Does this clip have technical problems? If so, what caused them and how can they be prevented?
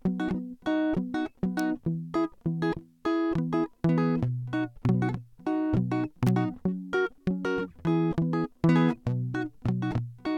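Yes: sharp snaps cut through the music at 1.59 s and from 6.27 to 6.29 s, peaking around -15 dBFS. These are electrical switching spikes, likely from a nearby switch, motor or static discharge. Keeping audio cables away from power lines, switched loads and motors, and using balanced, well-grounded connections, prevents them.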